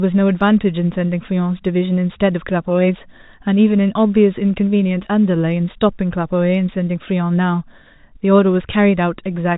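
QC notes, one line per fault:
No faults heard in this telephone-band speech.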